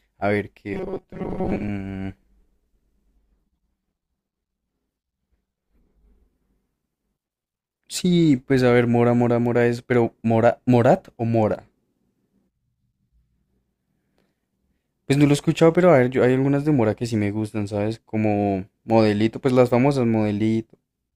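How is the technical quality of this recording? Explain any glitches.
One glitch stands out. Robotic sound from repeated short buffers, 0.74 to 1.69 s: a rigid metallic buzz near 188 Hz, likely from about half the audio being replaced by repeats of a roughly 5 ms buffer.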